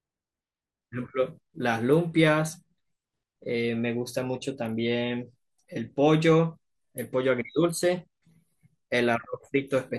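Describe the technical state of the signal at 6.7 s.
At 6.7 s the speech sounds dull and gurgling, with a grainy, watery edge, and this runs through the whole clip. The likely cause is MP2 compression at a starved bitrate, perhaps around 80 kbps: upper sub-bands drop out and flicker while the surviving bands are coarsely quantised.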